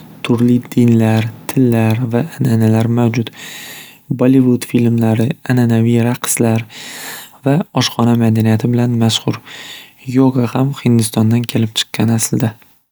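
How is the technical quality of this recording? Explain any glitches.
No glitches or faults detected.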